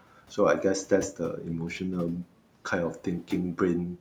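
Between 0.02 and 0.38 s, the opening speech is cut by the noise suppressor. The suppressor mistook parts of the speech for background and pulled them down with it, by up to about 12 dB, over a total of roughly a tenth of a second. Those sounds come across swallowed and faint. On a waveform the envelope dips in short notches. A spectrogram shows the weak speech energy thinned there, while the room noise sits about 23 dB below the speech.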